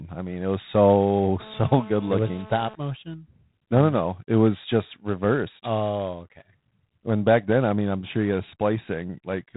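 The speech passes through G.726 ADPCM coding with too few bits per sample, which fits 24 kbit/s: a harsh, rasping hiss tracks the speech level, and nothing passes above 3.8 kHz.

From 1.40 to 2.75 s, a nearby 2G phone on a call causes GSM phone buzz as the audio circuit rectifies its radio bursts, producing a hard, raspy 217 Hz buzz about 20 dB below the speech.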